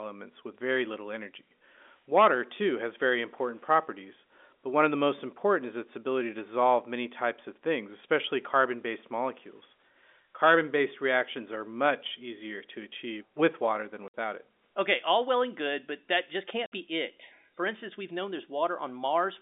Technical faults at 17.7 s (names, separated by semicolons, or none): none